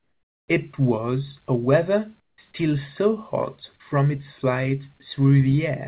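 A speech clip where the background drops out twice, from 0.00 to 0.48 s and from 2.20 to 2.38 s, and a smoother, featureless noise fills in, about 19 dB and 15 dB quieter than the real room. That's comfort noise in place of the background, likely from discontinuous transmission during pauses. Nothing reaches above 4 kHz, which fits a narrowband G.711 call path.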